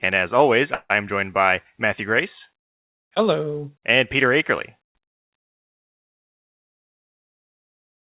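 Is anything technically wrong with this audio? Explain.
Yes. Just after "and as always", from 0.74 to 0.91 s, there is a call audio freeze. The last sound is stretched into a fading buzz or hiss that ends in about 40 ms of silence. The likely cause is delayed packets draining the jitter buffer. Unlike a dropout, nothing is lost: the audio resumes exactly where it stopped, only about 154 ms late. Throughout, the narrowband phone-style path shows in the absence of anything above 4 kHz.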